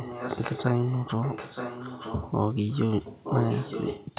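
From 0.0 to 0.65 s, 0.82 to 2.32 s and 2.69 s to the end, a copy of the speech trails it by about 0.92 s: echo leak, likely a loudspeaker echo canceller letting residue through. It sits roughly 10 dB down, rising to about 5 dB down in the last stretch.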